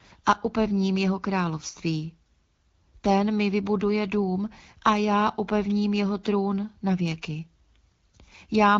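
No technical faults can be heard anywhere in the recording. It comes through an AMR wideband (HD Voice) link at 12.65 kbit/s, so the audio stops at about 7 kHz and carries only a light trace of the codec's processing.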